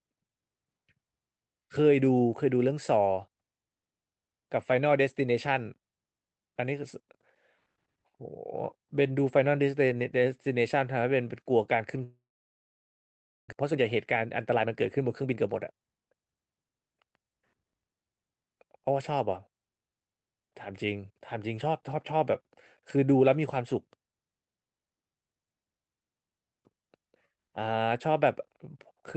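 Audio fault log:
12.03–13.54 s, long network dropout: the sound stops arriving and the last moment is drawn out into a fading buzz, then about 1.3 s of near silence before the audio returns with about a second lost, likely from stalled packet delivery.
13.62–17.18 s, jitter buffer speed-up: after the gap the receiver sits about half a second behind, so it repeatedly cuts out short pitch-period pieces. The speech runs at 113% speed with unchanged pitch and sounds hurried until that backlog is cleared.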